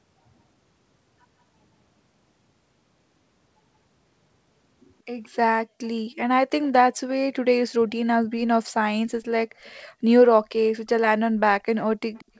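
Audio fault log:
12.14 to 12.40 s, echo leak. A faint delayed copy of the speech appears in the final moments, trailing about 179 ms behind and roughly 30 dB below it. This is likely a loudspeaker echo the far end's canceller failed to remove, returned through the call, and band-limited to 8 kHz like the rest.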